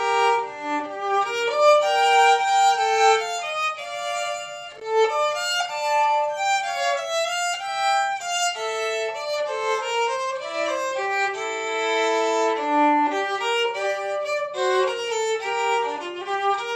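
At 4.70 s a burst of loose connector crackle breaks in and lasts until 4.81 s, about 120 ms. A worn or dirty contact is making and losing connection. The sound is chopped into an irregular scratching crackle.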